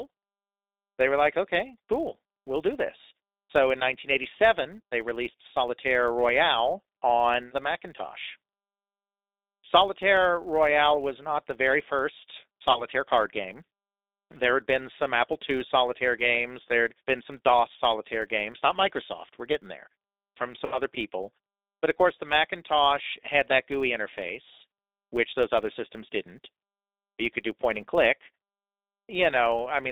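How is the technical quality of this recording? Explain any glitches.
Technical quality is rough: it's narrowband, codec-coloured speech with a steady buzz underneath, plus two short dropouts.

Throughout, you can plainly hear the G.729 codec. At 8 kbit/s it rebuilds the voice from a filter and a handful of pulses, leaving a 300 Hz to 3.7 kHz band that sounds slightly synthetic and rough.

Also throughout, there's a 100 Hz buzz from a filter restarted on every block. Each block starts from silence, so its little start-up transient repeats a hundred times a second and gets louder and quieter with the speech.

At 12.71–12.86 s, right after "not the very first" and before "card game", there's VoIP packet loss concealed by the speech codec. About 30 ms went missing, so the decoder stretched the last sound into a fading buzzy tone or coloured noise. The voice stays a bit weak just afterwards.

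At 20.66–20.80 s, just after "we're getting there from", the same concealment covers a longer gap of about 60 ms. The sound is stretched and fades before it recovers.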